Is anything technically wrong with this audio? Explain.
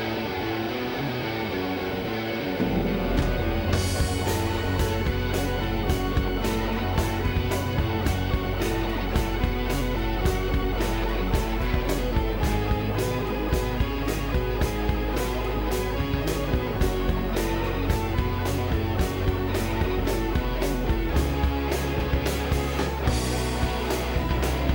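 Yes. Video or display buzz runs throughout. A screen or video cable couples into the audio, giving a 50 Hz buzz with hash, a 15.6 kHz line tone, roughly 25 dB down.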